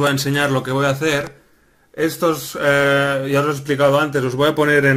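No technical faults can be heard anywhere in this clip.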